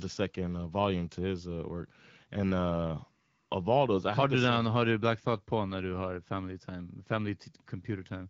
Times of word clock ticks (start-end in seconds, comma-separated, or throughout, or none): none